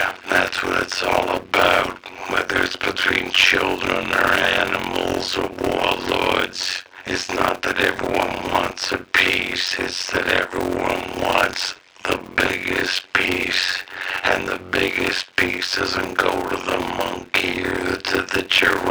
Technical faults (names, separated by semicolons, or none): block size mismatch (padded)